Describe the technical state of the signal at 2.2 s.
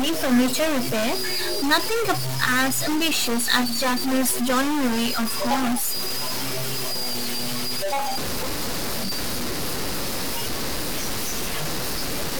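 At 2.2 s you're hearing a stuck bit, and it runs through the whole clip: harsh, buzzy distortion riding on the speech, with noise filling the gaps. Likely one data line is jammed, throwing samples off by about -20 dBFS.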